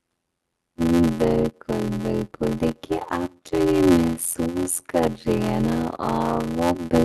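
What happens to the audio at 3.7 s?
At about 3.64 to 3.73 s there is a short stall from a late packet. A packet of the call stream arrived after it was due, and the jitter buffer ran dry. The receiver held the last sound for about 25 ms until the packet came. Then playback resumed from the same point. Nothing is lost. The sound at that moment is simply drawn out, with a faint buzz or dip. From here on the delay is about 25 ms longer.

The block size mismatch (padded) runs through this moment too. One stage hands over shorter blocks than the next stage reads. Each read block is filled out with silence. The rate of the gaps points to a 512-sample read block. The gaps repeat at 86.1 Hz and are heard as a steady buzz. The audio plays at 0.625 times its normal speed, but the timbre stays.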